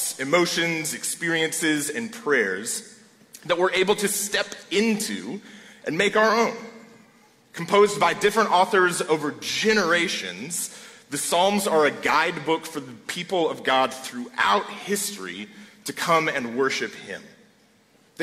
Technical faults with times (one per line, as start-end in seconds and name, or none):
none